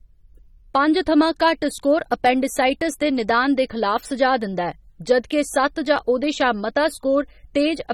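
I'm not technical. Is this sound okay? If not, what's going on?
No. The speech sounds dull and smeared throughout, with a fizzy, warbling edge on hissy sounds. That is likely AAC compression squeezing the file too hard.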